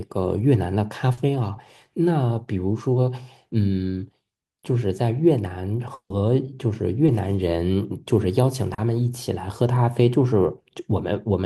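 It's a speech clip with short concealed packet loss at 1.13–1.27 s (40 ms lost, and the fill stretches things by a few milliseconds), at 7.06–7.10 s (20 ms) and at 8.74–8.80 s (40 ms). Each time the receiver carried the last sound forward and blended back, so you hear a brief smear or wobble. At 5.94–6.12 s, 160 ms is gone: a continuation of the last sound as a buzz or hiss fades into about 80 ms of silence before the speech picks up further along. That's most likely a long network dropout.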